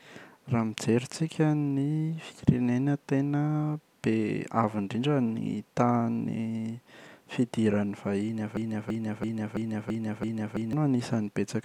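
Right after "vahiny avy", at 8.57 s, a broken-record loop kicks in: a 0.33 s chunk repeats six times until 10.73 s, likely a stalled player.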